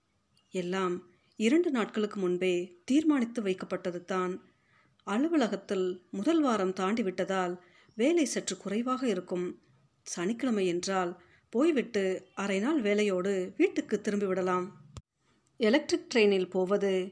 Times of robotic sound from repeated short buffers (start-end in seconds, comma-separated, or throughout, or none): none